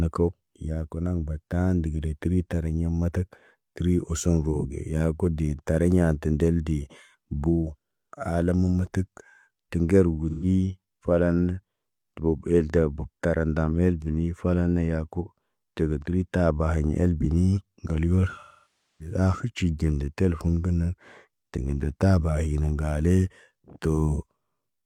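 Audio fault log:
10.29 to 10.45 s, AAC frame loss with concealment: a brief smeared, phasey patch of about 128 ms, consistent with roughly three lost frames. The decoder covers the gap by reusing the last good spectrum with altered signs and energy, so the sound blurs rather than cutting out.
18.40 to 19.14 s, AAC frame loss with concealment: a longer gap of about 0.6 s, pointing to around fourteen lost frames. The repeated spectrum runs out of plausibility, so the concealment fades toward silence and then fades back in.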